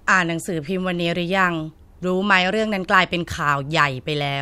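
No technical faults can be heard anywhere in this short speech recording; the signal holds steady throughout.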